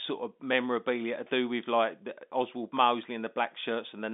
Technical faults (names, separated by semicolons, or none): clock drift buffer slips